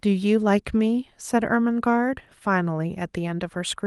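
No technical faults are audible.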